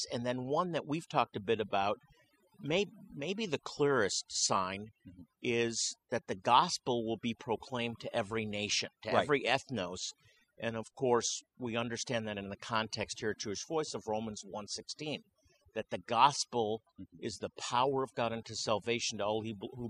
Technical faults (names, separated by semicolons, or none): overdone noise removal